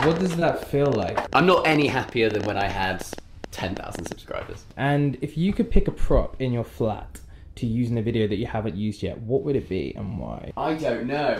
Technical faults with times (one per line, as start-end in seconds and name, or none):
0.01-4.13 train of clicks
0.39-0.43 short concealed packet loss